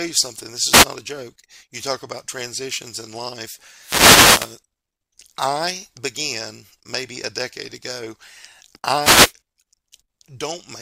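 At 0.71 s a wireless microphone noise hit lasts about 0.15 s. The radio link from an analogue FM microphone fades as reflected paths cancel, so receiver noise rises through the speech as a brief hiss. A longer hit runs from 3.78 to 4.58 s. A third runs from 9.00 to 9.33 s. On a spectrogram each shows as a broadband vertical smear of noise, with thin spikes in the waveform where clicks occur.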